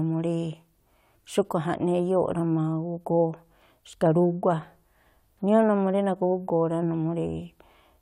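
Around 2.32 to 2.37 s there's a quick patch of DAB burbling. Weak reception let bit errors slip through the error correction, so a few MP2 frames decoded with errors in their sub-band data, giving a short burble over the speech, which fits a handful of damaged frames.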